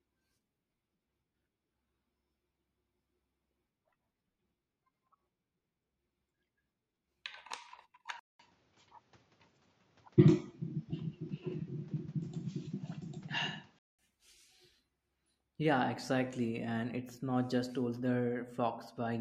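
Input switched to a poorer device, 8.19 to 13.99 s: after a 200 ms silence the speech loses everything above 7.6 kHz and turns duller, shifts level by around 5 dB and gains new noise roughly 35 dB down, likely from a narrower-band microphone.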